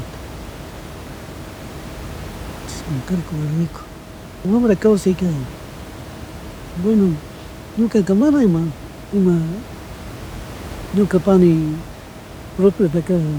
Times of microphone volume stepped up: none

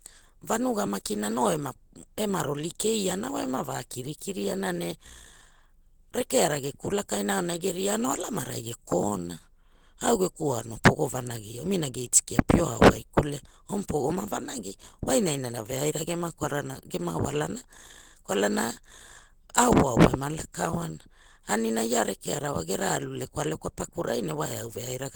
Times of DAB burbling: none

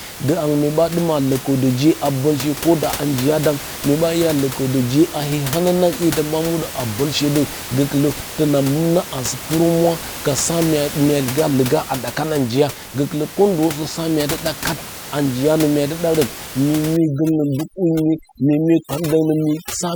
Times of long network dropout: none

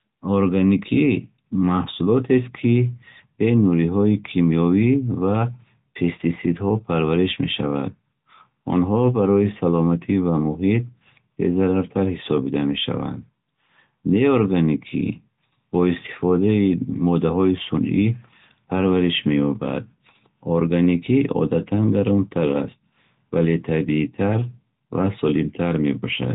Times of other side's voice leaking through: none

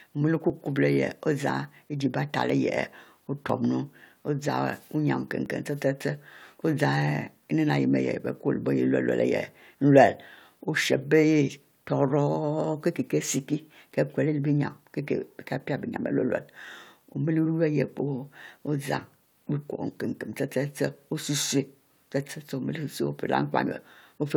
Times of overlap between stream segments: 0.50, 1.50, 2.50, 3.49, 4.49, 5.46

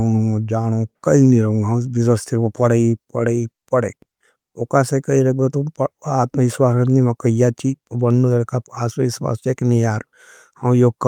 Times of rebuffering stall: none

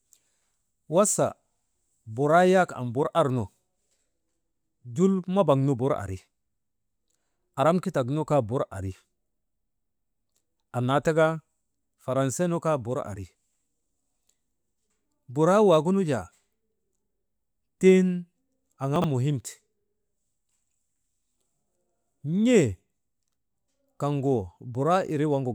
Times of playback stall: none

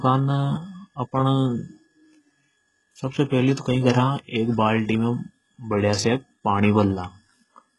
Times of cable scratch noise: none

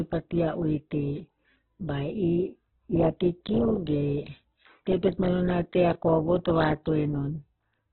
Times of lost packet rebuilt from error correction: none

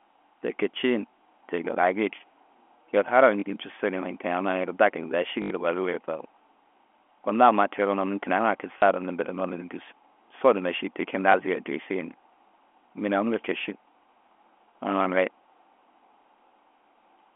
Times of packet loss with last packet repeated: 3.40-3.42, 5.42-5.50, 8.78-8.82, 11.32

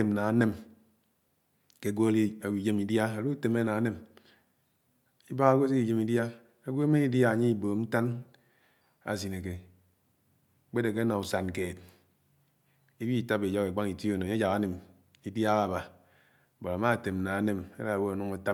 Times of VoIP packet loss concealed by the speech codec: none

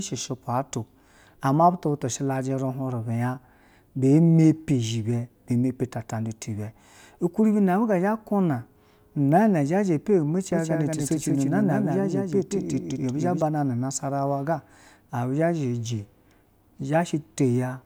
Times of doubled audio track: 10.52-13.42

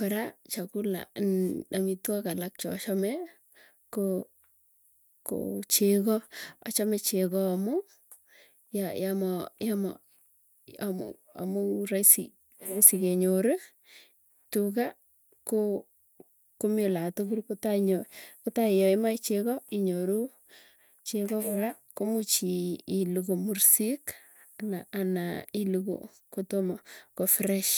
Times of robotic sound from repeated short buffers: none

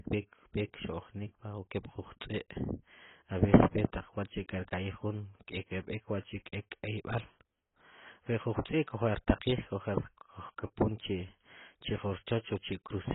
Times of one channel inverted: none

